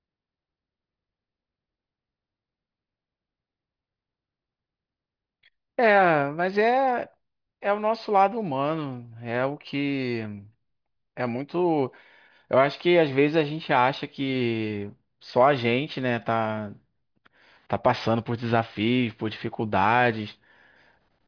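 Listening to the speech recording, nothing stood out as a technical problem at any point.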